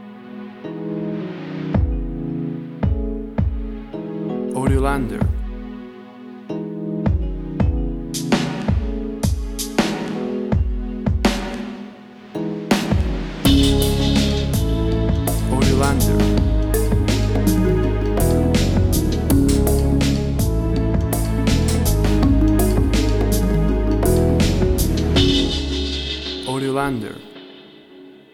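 No technical faults can be heard anywhere in the clip.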